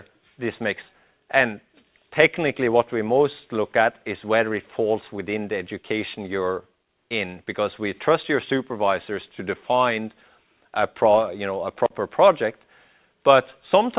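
From about 0.94 s to 2.94 s you get a jitter buffer speed-up. The receiver had built up more audio than it wanted, so it trimmed out tiny pitch-period-sized slices over and over to catch up, around 150 ms in total. That makes the sound run about 6% fast with the pitch unchanged, so it comes across as slightly rushed. The whole clip stops at 4 kHz, which fits a narrowband call codec such as G.711 mu-law.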